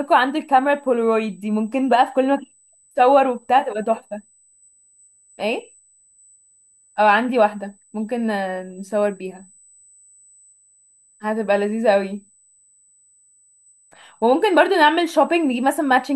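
A speech recording with USB whine running through the whole clip: a steady, fixed-pitch tone at 8 kHz, sitting roughly 35 dB below the speech. That frequency matches the bus's 125-microsecond microframe rate, its current draw leaking into the audio through shared power or ground.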